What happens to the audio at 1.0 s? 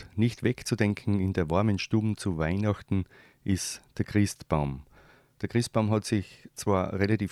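Nothing goes wrong at 1.0 s: the speech carries on intact through that moment, with no dropout, click or distortion to be heard.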